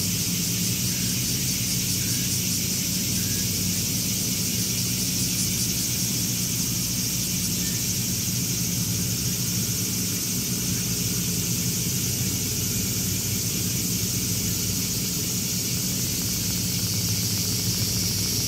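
From 15.77 s to 18.41 s a train of clicks sits over the sound: roughly forty near-identical pulses at a steady 13.7 per second, heard as a regular ticking that continues through any gaps. The clicks peak at about the same level as the audio itself, so they are plainly audible. Their even spacing and uniform shape point to a likely cause in periodic interference from nearby equipment or a faulty connection or power supply.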